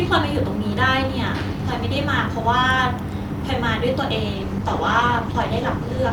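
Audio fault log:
4.35–6.12 s call bitrate drop: the encoder was cut from 64 to 16 kbps, so coarser coding and trimmed high frequencies leave the speech rough and muffled.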